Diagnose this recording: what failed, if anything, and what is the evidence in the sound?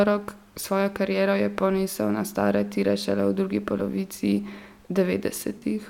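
Codec stage: AAC frame loss with concealment at 5.58 to 5.63 s, a 43 ms smeared, phasey patch, fitting two lost frames refilled from the last good spectrum.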